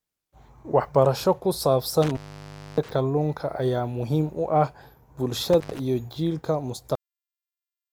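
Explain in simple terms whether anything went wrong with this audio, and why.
Two things went wrong in this speech clip.

The first is an intermittent contact. It happens twice. A loose cable or plug briefly lost its connection, so the sound drops out or breaks up. The first break runs from 2.02 to 2.91 s, with the line open for about 0.61 s. The second runs from 5.53 to 5.79 s, open for about 0.12 s. Crackle marks the edges where the contact opens and closes again.

The second is a cut-off end. At 6.95 s the recording stops in the middle of a sound. It doesn't fade out naturally. It just goes silent until the end of the clip. This means the final chunks of audio were never saved or played. The last part of what was being said is simply missing.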